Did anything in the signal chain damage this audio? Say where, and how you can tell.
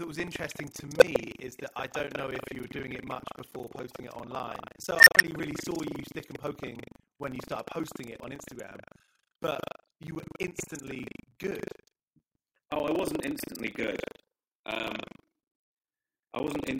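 Yes. Throughout the speech there is buffer tearing at the driver or buffer stage. A steady robotic rattle at 25 Hz rides on the audio and disappears in the pauses, so it depends on signal. The writer and the hardware reader of the ring buffer have drifted until they cross within each 40 ms period. Roughly a fifth of every period replays audio about 150 ms old, with hard joins on both sides of that stale segment.

An unstable filter in the processing chain fails twice. From 0.97 to 1.02 s, between "was interesting to" and "is that I don't", a tone near 500 Hz swells over about 45 ms and clips, then drops out for about 3 ms. From 4.96 to 5.17 s, just before "only really saw you", a tone near 2 kHz builds for about 104 ms and is followed by about 104 ms of silence. In both cases a recursive filter's output grew without bound, overflowed, and went silent until the filter reset.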